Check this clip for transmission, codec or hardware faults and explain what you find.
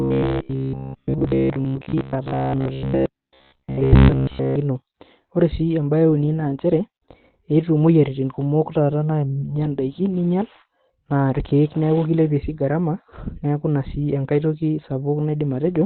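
Two faults are present in this speech.

Throughout, the sound is muffled and hoarse, with nothing above about 4.2 kHz. This is likely Opus compression in its narrowband speech mode. It fits a low bitrate near 12 kbps. The codec discards detail heavily, leaving a thin, rough tone.

From 0.02 to 4.56 s there is robotic sound from repeated short buffers. A steady metallic buzz sits at 66.7 Hz. That points to a 15 ms chunk being likely replayed while fresh audio is late. Most of the real sound in that span is skipped.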